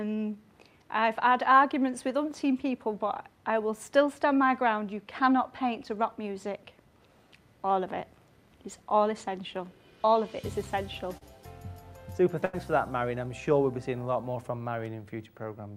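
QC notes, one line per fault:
11.17–11.23 s, short concealed packet loss: about 40 ms of audio arrived too late for the decoder, and the receiver bridged roughly 36 ms of it by extending the preceding sound before blending back, so the passage comes across as a brief smear or wobble.
12.45–12.55 s, burst of packet loss: several consecutive packets, about 80 ms in total, were lost or arrived too late. The receiver carried the last sound forward across the full 80 ms and faded it as the gap went on, heard as a short held buzz or fading hiss before playback resumes further along with that stretch missing.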